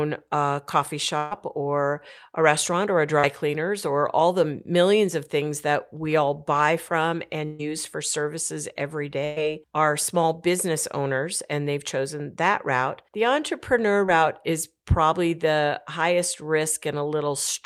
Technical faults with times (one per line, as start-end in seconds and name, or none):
1.17-1.33 burst of packet loss
3.19-3.25 short concealed packet loss
7.45-7.61 burst of packet loss
9.25-9.38 burst of packet loss
14.06-14.10 short concealed packet loss